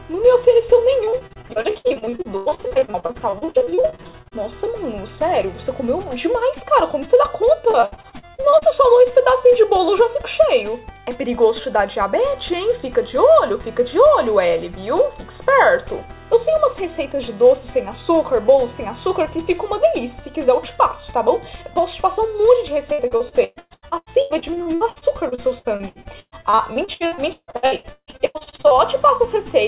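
Repeated packet loss (robotic sound) breaks up this call-path audio three times: 1.04–4.38 s, 7.71–8.65 s and 22.93–28.74 s. Dozens of short dropouts, the longest about 151 ms, are each patched by extending the preceding sound, so roughly two-fifths of each stretch is concealment, which makes it choppy. On a spectrogram these spans show smeared, repeated frames and abrupt seams, and the waveform shows short repeated segments. Everything sits below 4 kHz, which fits a narrowband G.711 path.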